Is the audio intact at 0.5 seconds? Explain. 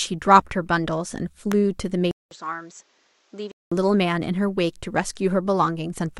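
Yes, at 0.5 seconds the speech plays through intact, with no dropout, glitch or other audible fault at that point.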